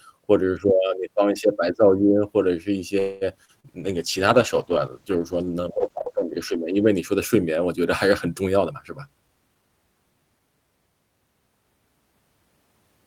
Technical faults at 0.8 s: none

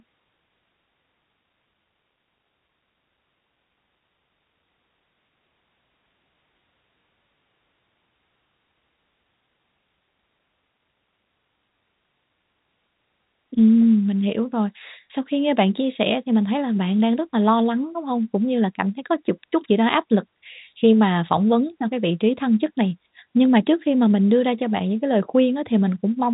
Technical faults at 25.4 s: none

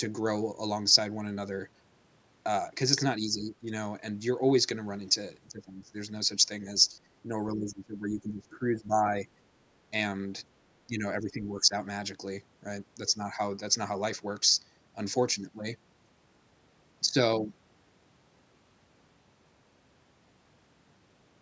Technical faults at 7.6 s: speech suppressed in double talk

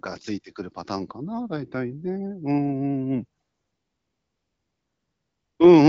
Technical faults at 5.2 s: AMR comfort noise

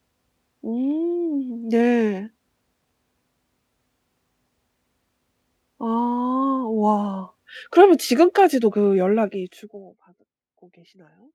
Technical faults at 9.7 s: zipper noise

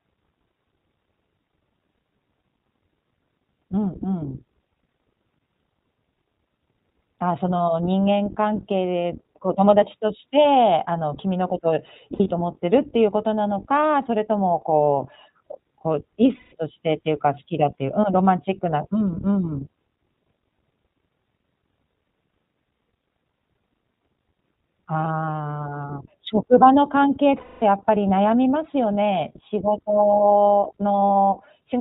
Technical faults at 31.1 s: iLBC codec; lost iLBC frames

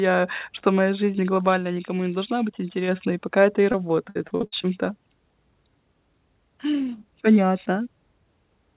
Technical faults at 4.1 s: repeated packet loss (robotic sound)

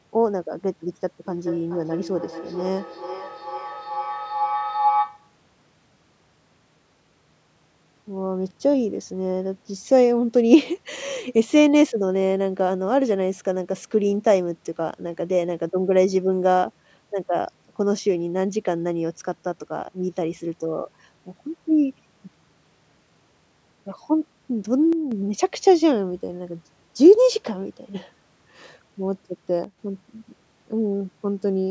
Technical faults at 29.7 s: one channel drops out

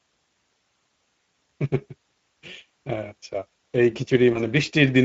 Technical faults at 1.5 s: Speex codec; VoIP packet loss concealed by the speech codec

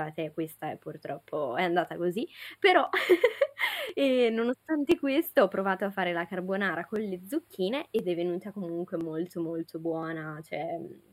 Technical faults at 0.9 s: channel delay (comb filtering); periodic USB or driver dropouts

